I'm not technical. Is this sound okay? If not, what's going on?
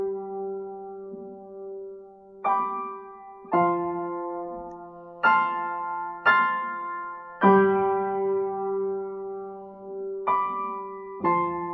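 Yes, this sound is okay, and there's nothing going on with it that needs fixing.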